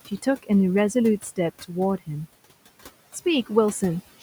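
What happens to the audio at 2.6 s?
At 2.6 s there are noise suppressor artifacts, present throughout: the suppressor pulls the room noise down by about 16 dB, leaving a residue that swells under the speech.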